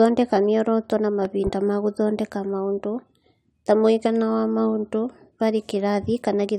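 At 1.25 s a loud pop breaks in, and a second follows before 1.50 s. The peak rises about 5 dB above the speech, which carries on underneath. The likely cause is a sudden voltage pulse, from a plug, switch or static discharge, entering the signal chain.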